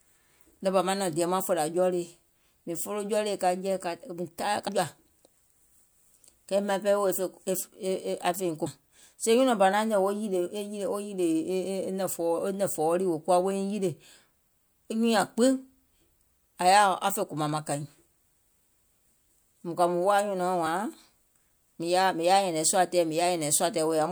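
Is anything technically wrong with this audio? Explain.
Yes. The speech has compressed frames skipped at 4.67 s, 8.65 s and 20.65 s. Each time, a few whole coded frames never reach the output, so the audio jumps forward by about 100 ms, about 100 ms and about 70 ms, in steps that fit a 24 ms frame. Unlike a dropout there is no silent gap.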